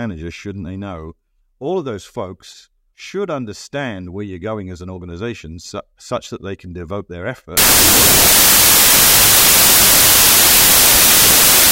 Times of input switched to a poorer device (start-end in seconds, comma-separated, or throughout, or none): none